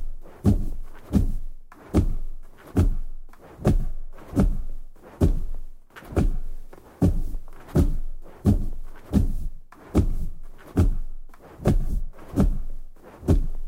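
No technical faults can be heard anywhere in this audio; the signal stays intact and steady throughout.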